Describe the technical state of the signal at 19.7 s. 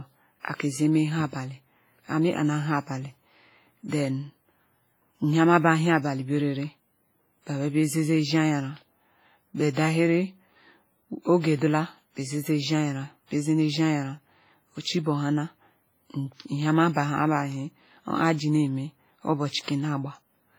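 Right around there, from 19.64 to 19.68 s, you get pre-echo: a short hiss creeping in about 37 ms before a sharp onset in the speech. The codec spreads its quantisation noise across a whole transform block, so when a hard attack lands late in the block, noise sized for the loud part spills into the quiet gap ahead of it. The result is that little breath of hiss, and the attack comes out softened and smeared instead of crisp.

Underneath that, the whole clip carries heavy damage that sounds like a transform codec at a low bitrate, most likely WMA compression, and it fits something around 24 kbps. Weaker spectral detail gets dropped, leaving a ringing, washy texture and a hiss that swells and fades with the level. Long blocks smear the noise over tens of milliseconds, which is exactly why the pre-echo at 19.7 s stretches out the way it does. The top end doesn't stop until about 21.4 kHz, so the damage shows up in the texture rather than as a dull or band-limited sound.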